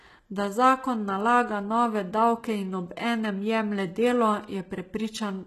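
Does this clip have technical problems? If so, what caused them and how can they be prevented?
Yes. Throughout, the speech sounds gritty and lispy on s sounds, with nothing above 12.3 kHz. This is likely HE-AAC compression at about 16 kbps: rebuilt treble misaligns harmonics. Prevent it by encoding at higher bitrate with plain AAC.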